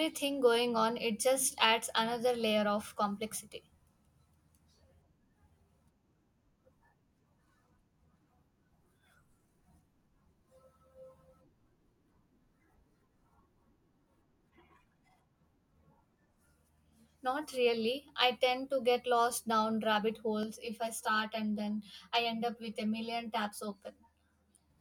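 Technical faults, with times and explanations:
20.43–24.70 s, channel delay (comb filtering): right after "get lost down rabbit", one channel arrives roughly 10 ms late and the mono sum turns hollow and phasey. Shared content cancels from around 50 Hz upward at regular spacing, drawing evenly spaced horizontal dark bands across the spectrogram.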